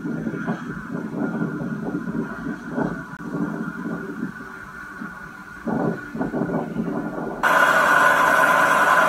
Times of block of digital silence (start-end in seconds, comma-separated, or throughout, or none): 3.17-3.19